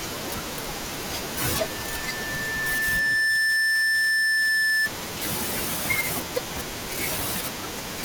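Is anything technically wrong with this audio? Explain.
Yes, there's loudspeaker feedback squeal from about 1.38 s to 4.91 s. The mic is picking up the speaker it's feeding, and at around 1.8 kHz the loop gain goes past one, so that frequency keeps reinforcing itself. You hear a single tone creep in and swell over a couple of seconds until it's ringing roughly 10 dB above the speech, then it stops once the loop gets broken.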